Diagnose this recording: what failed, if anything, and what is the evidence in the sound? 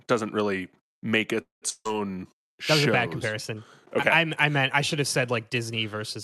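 Network and jitter-buffer stage, first a call audio freeze. Just after "doesn't really make", from 1.41 s to 1.64 s, the last sound is held as a fading buzz that sinks into about 150 ms of silence, and then the speech resumes exactly where it stopped. Nothing is skipped; the rest of the clip simply runs about 204 ms later. That points to packets that were likely delayed in transit while the jitter buffer ran dry, not lost.

The second fault, from 1.70 s to 1.88 s, is a long network dropout. It starts with the same fading concealment buzz, here about 150 ms of it with a brief silence of about 40 ms, but when the audio returns, roughly 160 ms of speech is gone rather than postponed. That missing stretch is what separates it from the freeze. The cause is likely packets that never arrived and were never played. Throughout, the Opus coding noise and the roughly 12 kHz band limit of the call path can be heard.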